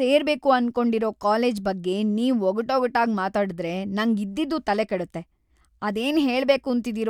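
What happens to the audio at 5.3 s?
Nothing goes wrong at 5.3 s; the speech runs on intact through that moment with no dropout, click, distortion or other fault.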